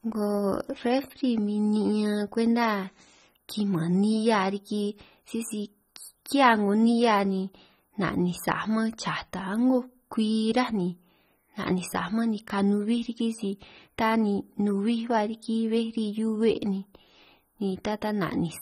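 Throughout the speech, the sound is dull and smeared, with a fizzy, warbling edge on sibilants and nothing above about 15.4 kHz. This is likely AAC compression at a low bitrate, around 24 kbps, quantising away spectral detail and lowering the cut-off.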